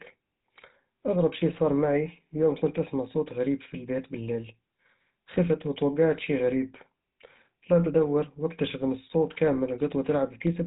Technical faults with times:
0.00-10.67 GSM full-rate codec

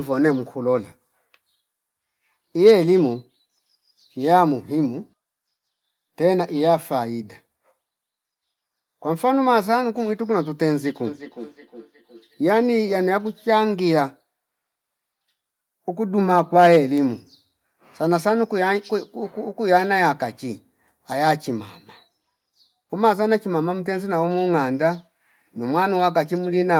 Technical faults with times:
11.06-12.71 feedback echo between two devices

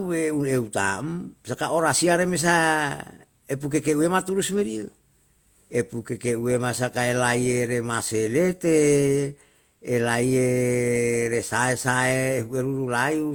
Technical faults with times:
0.00-13.35 transcoding between lossy codecs

